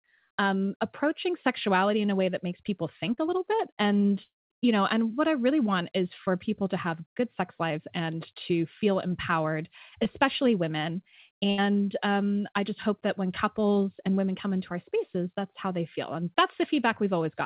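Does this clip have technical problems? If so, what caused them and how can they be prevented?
Yes. A short concealed packet loss at 3.14 to 3.19 s, between "way that makes people" and "a little bit": about 40 ms of audio arrived too late, and the decoder extended the preceding sound to bridge it, leaving a brief smear. A slightly deeper jitter buffer or forward error correction would prevent this.

At 4.23 to 4.52 s, just before "you know and what", the sound trails off as a fading buzz or hiss and then falls silent for about 220 ms, with roughly 280 ms lost. This is likely a long network dropout. A more stable connection, such as wired rather than congested Wi-Fi, would prevent it.

A burst of packet loss at 11.50 to 11.60 s, between "feel empowered especially women" and "um I just hope": about 80 ms of consecutive packets went missing, and the receiver held and faded the last sound before resuming. 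Redundant packet coding or reducing network congestion would prevent it. The G.711 mu-law call path, which cuts everything above 4 kHz, is working normally.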